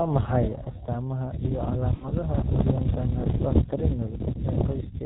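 Throughout, the speech has passed through the G.723.1 codec, whose narrow band and coarse, slowly updated voice model fit a rate of about 6 kbit/s. Nothing above 4 kHz survives, so the speech is muffled and hoarse, with consonants heavily smeared.

From 1.94 to 2.05 s, just after "maxay astamaha iyo", VoIP packet loss concealed by the speech codec appears. About 60 ms of audio was lost, and the decoder filled the gap by repeating its last pitch and filter at falling gain. This produces a brief, fading smear, and the speech stays weak until the decoder recovers.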